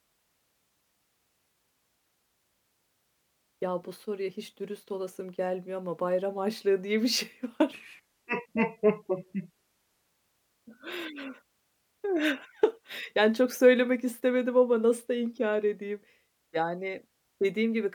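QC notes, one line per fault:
7.73–10.09 s: section at the wrong speed. Speech slows to 0.73x and drops about five semitones, likely from a clock mismatch. Spectrogram harmonics shift down and stretch.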